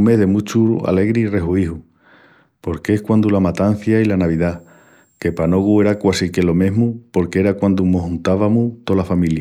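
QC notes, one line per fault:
4.20–6.20 s, switching supply whistle: a faint, high whistle sits roughly 45 dB below the speech, its pitch wandering slightly between 7.51 and 7.59 kHz. A switching power supply dropping into an audible burst mode puts its switching rate into the hearing range. The small pitch drift sets it apart from a fixed test tone, and its high pitch distinguishes it from low mains hum and its harmonics.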